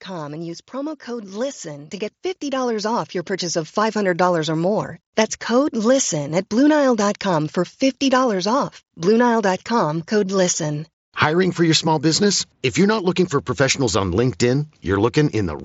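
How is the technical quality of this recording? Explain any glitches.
The recording has two gain glitches in its first five seconds. Both come from automatic gain control, and they pull the level down and then up. The sound arrives through a Bluetooth mSBC headset link, which cuts everything above about 7.7 kHz.

From 0.05 to 0.71 s there is automatic gain falling. The gain control judged the opening too loud, or its background noise too strong. It backed its gain off by about 3 dB. The speech starts at full level and then sinks slightly. The background sinks with it, because the whole signal is scaled, not just the voice. The dip is short and shallow, so it sounds like a brief settling.

From 0.71 to 5.02 s there is automatic gain rising. The control now decided the input was too quiet. It raised its gain steadily, by about 12 dB in total, over more than four seconds. The speech swells gradually, and the background noise swells along with it. 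The level finally settles after 5.02 s.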